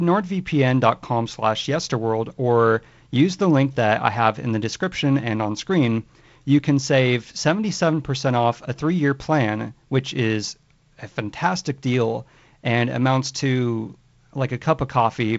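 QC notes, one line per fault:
Nothing here needs flagging; it's speech coming over G.722 wideband telephone coding, with the top end stopping around 7.8 kHz and a light grain from the coding that fits the codec's 48 kbit/s mode.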